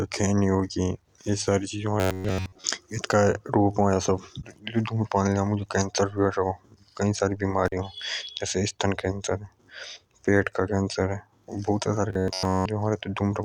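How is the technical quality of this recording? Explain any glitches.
The recording has two kinds of glitch, heard three times.

From 2.0 to 2.65 s and again from 12.1 to 12.66 s, there is robotic sound from repeated short buffers. The speech becomes a rigid, metallic buzz near 94 Hz. That points to one chunk of roughly 10.7 ms replaying. The likely cause is late-arriving audio, so most of the real sound is skipped.

At 7.66 to 7.72 s, an intermittent contact cuts the signal for about 36 ms. A loose connection briefly opens. The sound drops out, with crackle at both edges.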